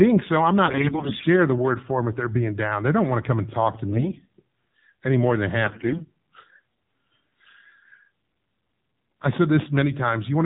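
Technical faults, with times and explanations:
throughout, AMR narrowband mobile codec: nothing passes above 4 kHz, and the voice sounds buzzy and synthetic, consistent with a low AMR-NB mode near 7.4 kbps. The dullness comes from the 8 kHz sampling, and the buzz from a vocal-tract model driven by sparse pulses. Unlike brief damage, it never lets up.
0.66–1.27 s, 3.92–4.28 s and 5.64–6.04 s, AMR bit errors: the voice turns hoarse, scratchy and gargly. Flipped bits in the less protected parts of each frame misplace the excitation pulses and skew the gain and spectrum values. Unlike packet loss, there are no gaps, and pitch and level hold. The first burst sounds roughest, and the second is mildest.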